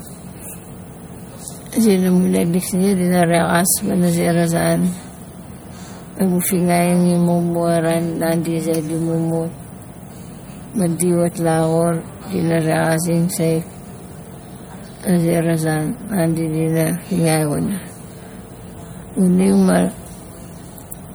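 From start to finish the speech has a watery, swirling texture, with metallic chirps around the s sounds and smeared consonant onsets. This is likely MP3 compression, at a rate that fits roughly 64 kbps. The encoder divides the signal into narrow frequency lines and, short of bits, drops the weaker ones. Those lines flicker on and off between frames, which produces the swirl. Content still reaches up to about 21 kHz, so the damage lies in the coding artefacts rather than a lowered treble limit.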